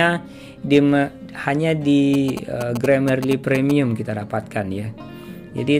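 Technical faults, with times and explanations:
2.14–3.72 s: GSM signalling bursts. A galloping dit-dit-dit of short buzzes sits under the sound for about a second and a half, at roughly 10 dB below the programme level. A nearby 2G phone was exchanging short control transmissions with the network rather than carrying a call. Some circuit in the audio path rectified the radio energy, turning each group of bursts into an audible pulse train. The buzz pitch sits at 216.7 Hz, the GSM frame rate.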